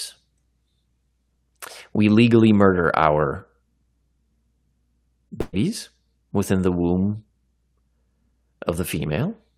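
At 5.41 s the speech breaks up in a burst of packet loss. Several packets in a row never arrived in time. The receiver filled the gap by holding the last sound and letting it fade. That concealment lasts about 113 ms, and there is no true silence. The speech returns at 5.55 s. It picks up further along, with about 120 ms of the speech simply gone.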